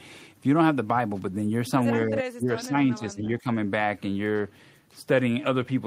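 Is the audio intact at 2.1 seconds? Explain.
No. Speech suppressed in double talk runs from 2.08 to 3.46 s, so 2.1 s falls just inside it. The speech level sinks, by around 15 dB at its deepest, and about a second of that span is held down. The likely cause is an echo canceller that, with both ends talking at once, could not tell this talker apart from the returning loudspeaker echo and so attenuated everything together.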